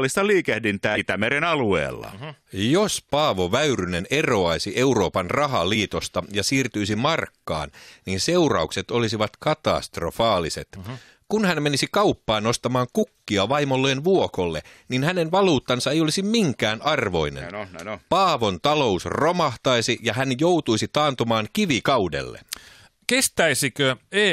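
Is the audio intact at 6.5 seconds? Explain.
Yes, at 6.5 seconds the speech plays through intact with no audible fault.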